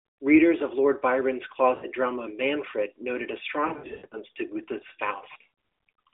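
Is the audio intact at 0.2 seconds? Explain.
Yes, the audio is intact at 0.2 seconds, with only the narrow telephone band of the AMR narrowband mobile codec at 12.2 kbps, which is how this speech is carried throughout.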